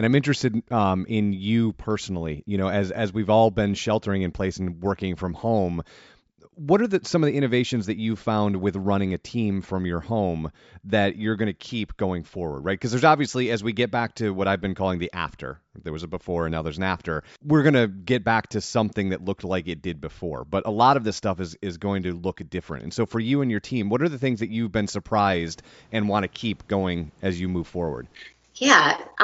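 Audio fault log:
No faults are heard anywhere in the speech.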